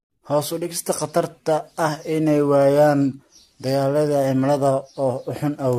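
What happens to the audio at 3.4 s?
At 3.4 s the speech sounds swirly, hollow and smeared, with blurred attacks, likely generation loss from roughly four lossy re-encodes that fit 64 kbit/s AAC-LC. It runs throughout the clip. On a spectrogram, energy stops above 14.2 kHz.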